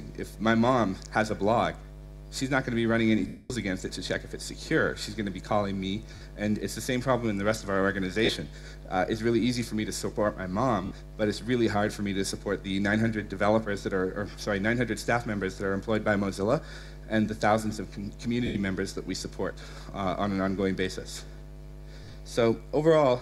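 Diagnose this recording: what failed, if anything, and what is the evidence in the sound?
Lost LE Audio frames on the Bluetooth link: gaps at 3.27 s (230 ms, fading), 6.15, 8.25, 10.85, 18.46 and 22.04 s show as noisy smeared spectra where LC3 concealment repeats the last spectrum with random signs.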